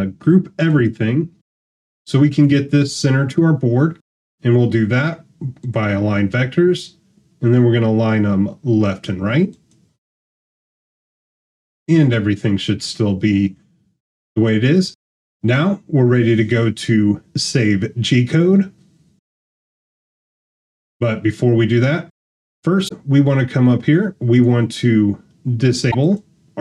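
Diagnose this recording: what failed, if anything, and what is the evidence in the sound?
Two short glitches break through the sound, the first from 22.85 to 22.91 s and the second from 25.88 to 25.95 s, each lasting about 70 ms. The fault sits at the codec stage and points to damaged data in a compressed stream: corrupted bytes in those frames were misread or refused by the decoder, and the decoder lost sync until it found the next valid frame header.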